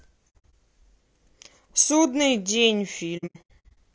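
Throughout the speech, a rough, grainy texture with noise filling between harmonics points to low-delay AAC compression, likely AAC-ELD near 32 kbps. On a spectrogram, the harmonic stripes look smeared and the top band looks blotchy.

From 0.30 to 0.53 s, AAC frame loss with muting leaves soft-faded holes, about 150 ms silent in all with the longest near 70 ms, which fits whole frames zeroed by the decoder. The waveform shows tapered gaps with no spikes.

From 3.17 to 3.78 s, the same AAC frame loss with muting returns more heavily. About 360 ms drops out in scattered holes, the longest around 100 ms, showing as empty vertical bands on a spectrogram.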